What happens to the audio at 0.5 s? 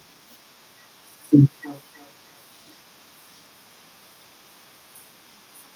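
Nothing goes wrong at 0.5 s; the speech there is intact, with no dropout, click, distortion or other fault.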